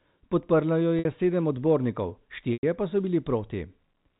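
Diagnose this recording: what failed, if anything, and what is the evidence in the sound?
The network stage failed, with packet loss concealed by pitch repetition. At 0.99 to 1.05 s, just before "sedem odbornikov", a 60 ms gap is bridged by a briefly held, buzzy tone. At 2.53 to 2.63 s, between "sedem odbornikov" and "pa so", a 100 ms gap repeats the last pitch period and fades. That span fits about ten 10 ms packets. A buffer underrun would leave a hard silence or click. This gap is filled with repeated pitch under the band-limited G.711 telephone sound.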